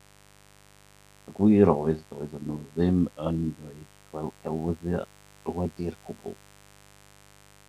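Mains buzz runs throughout this speech clip, a steady raspy drone about 30 dB below the voice, built from 50 Hz harmonics reaching several kHz, from switching spikes leaking in twice per mains cycle.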